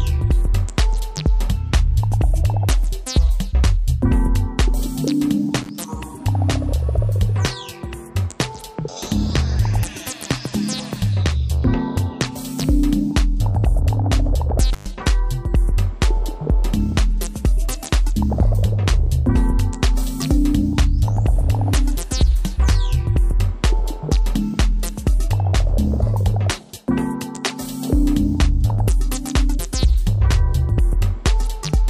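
At 5.62 s and again at 14.73 s, an intermittent contact briefly opens the signal path, as a loose plug or cable would. The sound drops out, for about 34 ms and then about 111 ms, with crackle at each edge. On a waveform these show as sudden gaps bracketed by sharp spikes; a spectrogram shows vertical broadband streaks around near-empty gaps.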